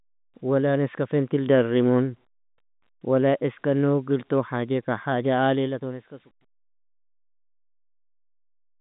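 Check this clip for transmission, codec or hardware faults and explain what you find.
I find no transmission, codec or hardware faults in this clip.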